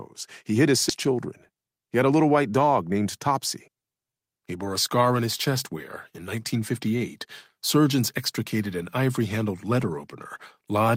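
Right after "hid his", at about 0.89 to 0.91 s, there's a skip ahead: roughly 0.7 s of speech got dropped and playback jumps straight on, no gap. Then from 0.98 to 3.28 s a jitter buffer speed-up kicks in, trimming short pitch-period chunks, about 0.3 s in all, so speech runs at 111% speed, hurried but same pitch.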